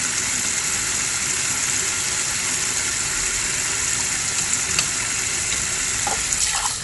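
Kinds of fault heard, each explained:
Dolby Digital compression: the audio is dull, with nothing above about 11.4 kHz and a rough, fluttering noise around tonal parts, likely from AC-3 coding at a low rate near 64 kbps, where bands without bits are filled with dither noise, unlike simple low-pass filtering, which leaves no such grain.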